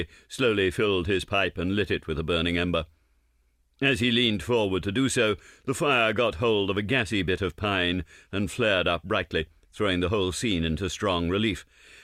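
No technical faults can be heard anywhere in the audio.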